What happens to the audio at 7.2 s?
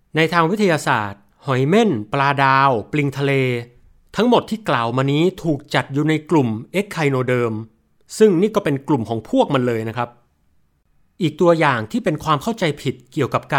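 Nothing goes wrong at 7.2 s; the speech carries on intact through that moment.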